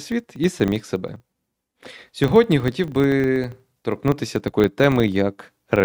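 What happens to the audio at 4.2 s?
At 4.2 s the speech carries a filter restarted on every block, a fault running through the whole clip. The filter drops its stored state at each block boundary and starts from silence, so every 40 ms a small transient appears, heard as a 25 Hz buzz that rises and falls with the speech level.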